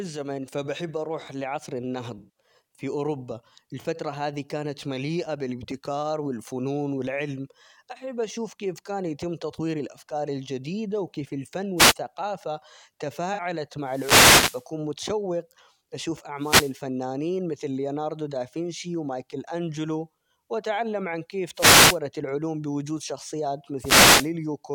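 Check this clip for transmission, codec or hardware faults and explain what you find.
Two kinds of fault turn up in this speech clip: a few concealed codec frames, and a run of radio-mic dropouts.

The corrupt frame concealed events sit at 2.18–2.42 s, 3.80–3.86 s and 13.33–13.40 s. The first, about 0.24 s, is long enough to fit roughly eight damaged AAC frames in a row. The decoder caught the bad bits and papered over them by muting or reusing a scrambled copy of the last good spectrum.

The wireless microphone noise hits land at 11.77–11.94 s (right after "الأفكار الجديدة وكيف الفن"), 13.84–14.69 s (just before "متشوق أشوف"), 16.38–16.76 s, 21.54–21.99 s (between "أنجلو وأتعلم عن كيف" and "العلوم بوجود شخصيات") and 23.79–24.32 s. Each is a swish or burst of static. The FM signal fades as reflections cancel, and the receiver's own noise rises up and buries the audio. The longest runs about 0.85 s.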